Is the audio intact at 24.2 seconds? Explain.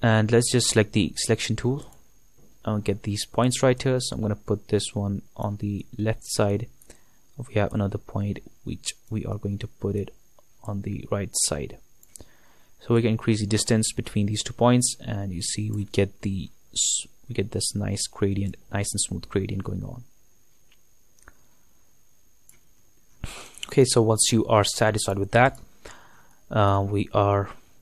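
Yes, the audio at 24.2 seconds is intact, with no audible dropout, click, distortion or other technical fault at that moment.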